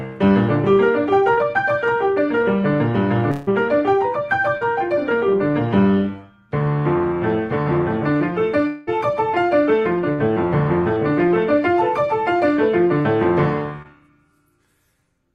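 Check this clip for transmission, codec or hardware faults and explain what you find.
The clip has three kinds of transmission fault, all from lost audio data that the receiver patched over.

Short concealed packet loss occurs at 1.33, 4.57, 13.01 and 13.82 s. About 40 ms went missing each time, 20 ms at 13.82 s. The receiver extended the preceding sound, leaving brief smears or wobbles.

At 3.31 and 8.67 s, the sound freezes into a fading buzz or hiss for about 0.16 and 0.2 s. Then it resumes further on. The likely cause is a long network dropout, fully covered by concealment.

A burst of packet loss at 10.13 s removed about 60 ms. The last sound was held and turned down, then the audio jumped ahead.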